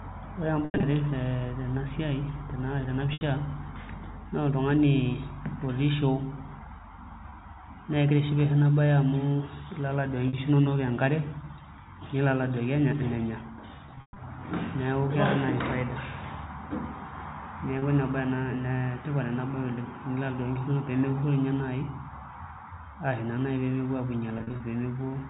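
Packet loss with pitch repetition hits at 0.65, 3.13, 7.3, 10.28, 13.86, 17.79 and 24.38 s. The receiver loops the last pitch period over each gap. The shortest, 20 to 50 ms, come through as a brief buzzy hold. The longer scattered ones near 0.65, 13.86 and 24.38 s (140 to 220 ms) fade toward silence before the speech cross-fades back, all over a band-limited telephone-style line.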